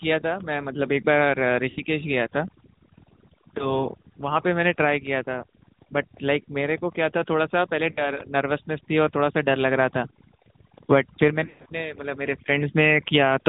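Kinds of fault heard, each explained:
overdone noise removal: the denoiser was pushed too hard, so the background drops and breaks up into twinkling specks.
AMR narrowband mobile codec: the speech went through AMR-NB, which fits about 10.2 kbps, so nothing above 4 kHz survives and the voice sounds plainly buzzy and synthetic.
lost AMR speech frames: the decoder papered over missing frames by repeating old settings at falling gain, giving dips or warbles at 1.7, 3.6 and 7.9 s and a smeared, fading patch around 11.5 s.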